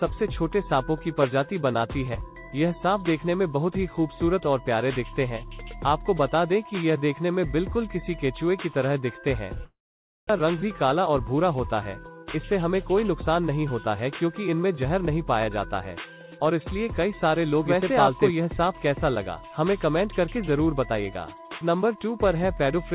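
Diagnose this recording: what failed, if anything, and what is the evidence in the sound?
Network stage: likely a long network dropout. At 9.64 s the sound fades into a decaying fill, then silence until 10.31 s. About 0.6 s never returns.

Buffer stage: a jitter buffer speed-up from 10.95 to 11.51 s. Playback runs at 105% with unchanged pitch. Pitch-period cuts trim roughly 40 ms of backlog.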